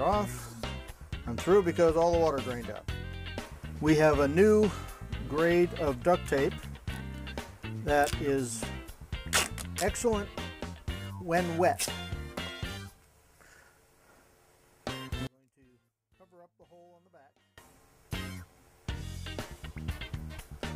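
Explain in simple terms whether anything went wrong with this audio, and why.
One channel inverted, from 15.27 to 17.58 seconds: the sound suddenly shrinks to a faint trace. One stereo side likely had its polarity flipped, so when the two sides are combined into one, everything they share cancels out, leaving only their small differences.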